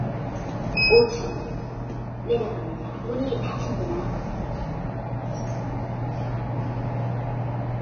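From start to finish the audio carries heavy damage consistent with Vorbis compression at a very low rate, likely around 18.5 kbps. Nothing is heard above about 6.5 kHz, and the upper range that remains has been quantised so coarsely that its fine detail turns into a hissy, grainy wash of similar energy, roughening tonal sounds and softening attacks. Unlike a simple low-pass filter, which leaves a clean but dull top end, this treble is noisy and textured.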